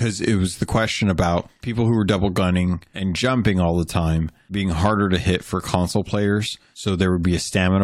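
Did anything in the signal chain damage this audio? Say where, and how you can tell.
No, nothing in the signal chain damaged this audio.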